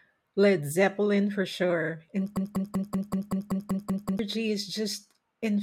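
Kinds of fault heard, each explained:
broken-record loop: Right after "for sure and", at 2.37 s, the speech snags on one fragment of about 0.19 s and plays it ten times back to back, identical every pass, until about 4.19 s. That sort of stutter most likely comes from the player or stream stalling and replaying the last chunk it was holding, so whatever should have been heard across those 1.8 seconds is simply gone.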